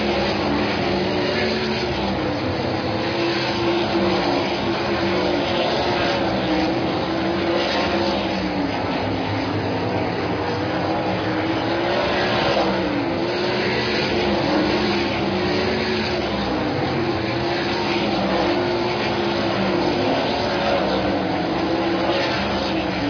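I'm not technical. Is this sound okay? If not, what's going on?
Yes, this sound is fine. Nothing in it points to a technical problem you need to worry about.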